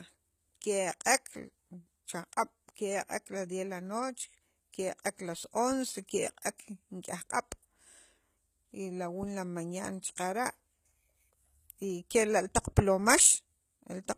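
Across the whole speech clip, codec damage is plainly audible and nothing reaches above 14.9 kHz. This points to HE-AAC compression at a low rate, around 20 kbps: the upper band is likely rebuilt by spectral band replication from copied lower bands, so its harmonics do not line up with the original.

At 6.58 s there is pre-echo lasting 13 ms. A transform codec spread quantisation noise sized for a sharp attack across its whole block, so a short burst of hiss fills the quiet moment just ahead of the attack and smears its onset.

At 12.52 s the sound jumps ahead with no gap of silence, losing a few milliseconds of audio. This is likely a dropped buffer (overrun): samples were overwritten before the program collected them, and the audio on either side was joined directly.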